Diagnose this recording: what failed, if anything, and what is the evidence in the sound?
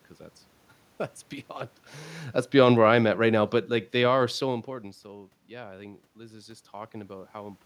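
Automatic gain falling, in the call processing stage. From 2.56 s to 5.07 s the speech sinks by about 7 dB. The room noise sinks with it. That shared drop shows the gain control, not the talker, lowered the level after judging the input too loud or its background noise too strong.

Automatic gain rising follows, also in call processing. The input level fell by about 12 dB, around where the talker moves back near 4.5 s. From 5.04 s to 7.61 s, speech and background swell together by about 5 dB as the controller slowly raises gain to compensate.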